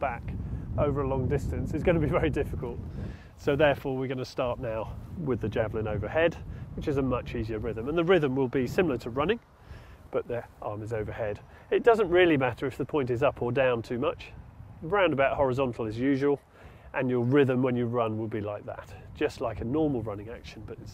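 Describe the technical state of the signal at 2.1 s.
At 2.1 s the signal is intact, with no audible dropout, distortion, or other fault at that moment.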